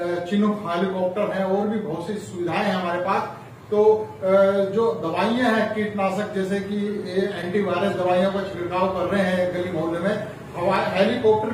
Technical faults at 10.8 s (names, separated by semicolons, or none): block of digital silence